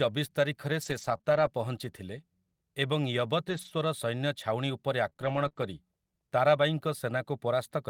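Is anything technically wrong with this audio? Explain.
Yes. From 0.81 to 5.63 s, the speech has about seven brief ticks and smears: scattered short gaps, each patched by extending the preceding sound.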